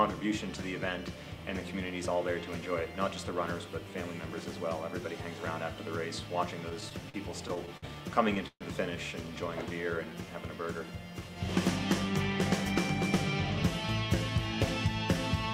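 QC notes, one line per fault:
6.69–7.84 s, repeated stalls (stutter): the audio catches eight times in just over a second, with 164 ms filled in altogether and the longest hold about 54 ms. Packets kept arriving late, the jitter buffer kept running dry, and the receiver stretched the last sound each time. Nothing's lost, but about 14% of that stretch is filler, so it drags and stutters.
8.48–8.63 s, call audio freeze: the sound hangs for 131 ms, the last bit carried on and then about 50 ms of silence, before picking up where it left off. Nothing's missing. The likely cause is packets held up in transit emptying the jitter buffer, which pushes everything after it 131 ms later.
10.05–10.27 s, jitter buffer slow-down: a short patch plays at 86% speed, with 38 ms added, so sounds draw out while the pitch stays put. The receiver was building up its reserve by repeating single pitch periods or bits of pause several times in a row.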